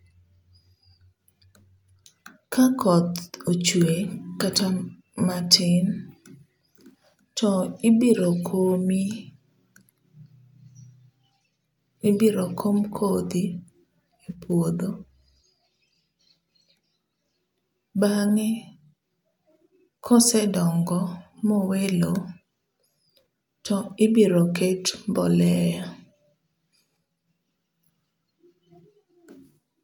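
A recording of speech with nothing technically wrong to flag anywhere in it.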